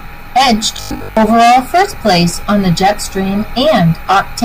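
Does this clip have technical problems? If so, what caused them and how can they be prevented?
Yes. From 0.77 to 1.17 s the speech turns into a rigid, metallic buzz pitched at 50 Hz that only loosely follows the syllables. This is robotic sound from repeated short buffers, and the likely cause is new audio arriving too seldom, so the software kept replaying the last 20 ms chunk, whose length sets that 50 Hz pitch, while most of the real audio in that stretch was skipped. Giving the audio path more buffering headroom and keeping the processing thread from being starved would prevent it.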